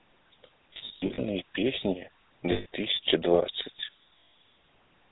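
The speech runs through a GSM full-rate codec, consistent with a 13 kbps stream, which cuts everything above 4 kHz and leaves a buzzy, gravelly roughness. Lost GSM frames appear at 0.74 to 1.2 s (about 260 ms lost in short bursts, the longest under a tenth of a second), 2.52 to 2.66 s and 4.18 to 4.34 s. Each gap is filled by repeating the last good frame, so the sound holds as a rough metallic ring.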